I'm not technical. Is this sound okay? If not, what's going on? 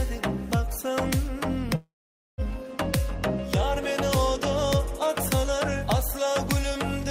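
No. There is a call audio freeze from 1.75 to 2.41 s. The sound stalls, fades into about half a second of silence, then resumes exactly where it stopped. Nothing is lost, but everything after is delayed about 0.63 s, likely because data was held up on the network.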